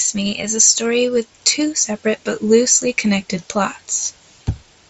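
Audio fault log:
No faults are present in this speech clip. The sound carries the character of a Bluetooth mSBC headset codec, with nothing above about 7.7 kHz and only a faint graininess on the louder passages.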